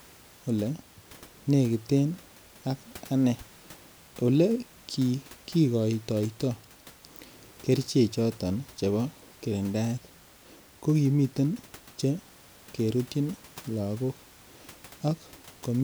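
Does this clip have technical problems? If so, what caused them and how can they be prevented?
No, nothing stood out on listening to this speech clip, and the faint room noise, about 26 dB below the speech, is simply part of the recording space.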